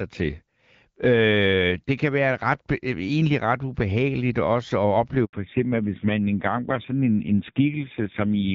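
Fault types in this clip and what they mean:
handover gap: The call hops from one network to another, and for about 80 ms, from 5.25 to 5.33 s, no speech frames get through. The sound dies away within a few tens of milliseconds into silence, and whatever was said in that slice is simply gone.
fallback to narrowband: Right after the gap, from 5.33 s to the end, everything above 4 kHz vanishes and the speech turns duller and rougher. The earlier HD Voice stretch fits AMR-WB around 12.65 kbit/s, and the later part sounds like low-rate AMR-NB near 5.9 kbit/s.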